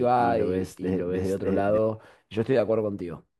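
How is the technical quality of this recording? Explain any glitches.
The recording has one clear glitch, a doubled audio track that runs from the start until 1.78 s. From 0.0 to 1.78 s, a second copy of the speech plays about 0.7 s behind and roughly as loud, likely from a second, slower capture path. Unlike an echo or reverberation, it keeps full bandwidth, has no decay or room colour, and cuts off abruptly at 1.78 s.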